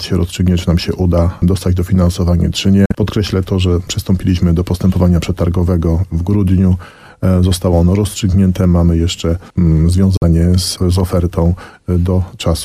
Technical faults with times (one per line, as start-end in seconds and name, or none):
2.86-2.93 Bluetooth dropout
10.17-10.23 Bluetooth dropout